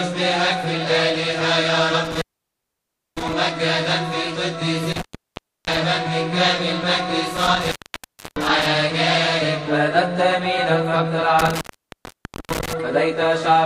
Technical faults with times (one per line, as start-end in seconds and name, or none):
2.05-3.33 intermittent contact
4.92-5.77 intermittent contact
7.37-8.66 intermittent contact
11.39-12.73 intermittent contact